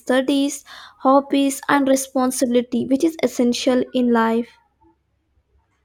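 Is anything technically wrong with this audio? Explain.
Yes. From 2.64 s to the end of the speech, de-emphasis has been applied wrongly. A treble-cut filter meant to reverse pre-emphasis was run on audio that either never had that boost or had already been corrected. The result is a smooth downward tilt, with 10 kHz sitting about 8 dB below 1 kHz, so the speech turns duller and more muffled at that point. On a spectrogram, the upper bands fade from 2.64 s onward. The waveform changes little.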